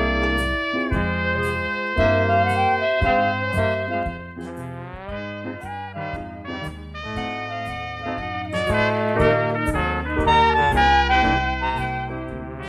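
Zipper noise appears at 3.53 to 4.37 s, 8.17 to 8.82 s and 11.15 to 11.98 s. The level moves about 10 dB, down, then up, then down, in 2 dB jumps without smoothing. Each jump clicks, giving a rapid ticking during the fade.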